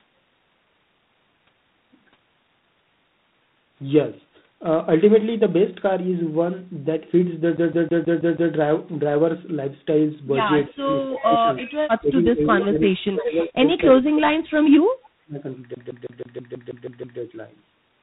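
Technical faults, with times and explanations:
Throughout: G.726 ADPCM at 24 kbit/s. Coarse three-bit difference coding leaves a harsh, rasping hiss that tracks the speech level, with nothing passing above 4 kHz.
7.57–8.53 s: CD stuck on one turn. The same 161 ms slice repeats six times with a brief mute at each jump, giving a fast, even skipping stutter.
10.69–11.47 s, 12.01–14.53 s, 14.95–15.45 s: speech suppressed in double talk. The speech dips and breaks up, by about 15 dB at first and later about 35 and 40 dB, likely from an echo canceller turning down both sides while they overlap.
11.18–11.25 s, 11.57–11.77 s, 12.6–12.89 s, 13.19–13.25 s: echo leak. Short scraps of the speech return 326 ms late, about 10 to 25 dB below it, likely loudspeaker pickup the far-end echo canceller failed to remove.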